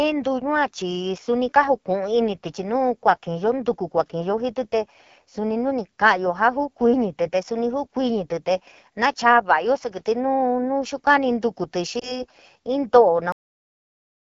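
Speech coded with the AMR wideband (HD Voice) codec sounds rough and raspy throughout. That grain points to one of its lowest modes, likely 8.85 kbit/s. Near 11.99 s, one lost AMR speech frame of 20 ms gives a brief dip or warble. The sound stays unsteady until about 12.26 s while the decoder recovers. At 13.32 s there is a cut-off end. The audio stops mid-sound and falls straight to digital silence, because the final buffers were never played.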